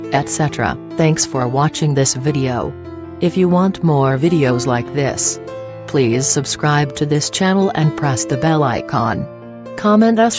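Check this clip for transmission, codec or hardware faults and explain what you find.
No faults turn up anywhere in the clip. Nothing in the audio points to trouble in the chain that captured or carried it.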